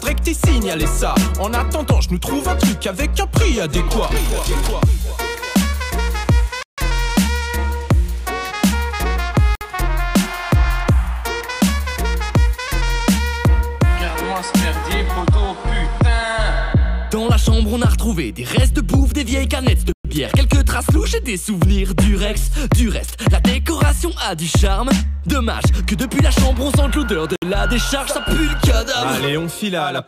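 A likely Bluetooth stall, where held-up packets left the headphones' buffer empty until resent data arrived, recurs four times in this audio. Playback drops to silence at 6.63 to 6.78 s (152 ms), 9.55 to 9.61 s (57 ms), 19.93 to 20.05 s (121 ms) and 27.36 to 27.42 s (64 ms). After each gap the sound resumes as an abrupt hard cut rather than a fade.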